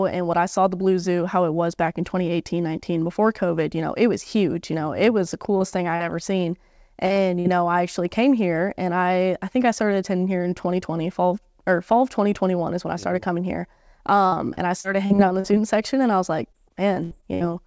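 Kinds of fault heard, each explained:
Short concealed packet loss: Brief holes where audio arrived too late and the receiver extended the preceding sound to cover them, then crossfaded back. Here there are five, at 5.58, 5.70, 5.96 to 6.02, 7.06 to 7.12 and 7.14 s, each 20 to 40 ms. They sound like tiny smears or wobbles. On a spectrogram, harmonics run on unnaturally smooth for a sliver; the waveform shows a short, overly regular repeated cycle.
Burst of packet loss: A longer run of missing audio, about 60 ms lost at 7.40 to 7.47 s, with roughly 50 ms synthesised by continuing and fading the last sound before playback jumps ahead. It is heard as a held buzz or fading hiss followed by an abrupt resumption. A spectrogram shows a flat, frozen spectral slice decaying in level, and the waveform shows a shrinking repeated pattern ending in a join.
Repeated packet loss (robotic sound): Losses recurring in quick succession, each patched before the next arrives. 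From 14.27 to 15.46 s there are seven gaps, the longest about 50 ms, covering about a fifth of the span. From 16.52 to 17.42 s there are six, the longest about 70 ms, about a quarter concealed. The result is choppy sound with pieces missing. A spectrogram shows frozen bands alternating with real speech beneath the 8 kHz ceiling of the G.722 path.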